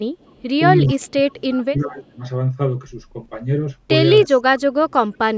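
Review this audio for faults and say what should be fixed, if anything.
Echo leak occurs at 0.2–0.42 s, 0.86–1.12 s and 1.5–1.6 s. A faint copy of the speech trails 342 ms behind. It sits about 35, 30, then 25 dB below the speech, so it grows stronger each time. The likely cause is a loudspeaker at the far end, where the echo canceller let part of its microphone pickup return down the line. A headset, or better echo cancellation on that device, would stop it.

Speech suppressed in double talk occurs at 0.94–2.23 s, 4.27–4.37 s and 4.53–5.19 s. The speech dips and breaks into pieces while the other side talks. The drops reach about 25, 15 and 35 dB. The first stretch loses roughly a second of speech in total. The likely cause is an echo canceller that could not separate the talker from the loudspeaker echo, so it turned both down. Better double-talk detection in the canceller, or headsets on both ends, would prevent it.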